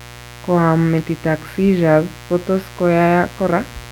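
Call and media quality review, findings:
Mains buzz under the speech, start to finish. Steady raspy buzz on a 60 Hz base, harmonics climbing into the low kHz, sitting roughly 20 dB below the talker. Probable component: dimmer, rectifier or unshielded cable near the mic path. Switching spikes leak in twice per mains cycle, hence the harsh edge rather than a clean hum. Worth checking grounding and cable shielding first.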